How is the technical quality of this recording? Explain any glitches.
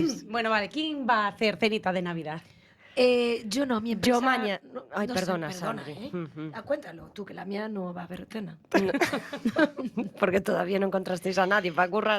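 No glitches or faults are audible.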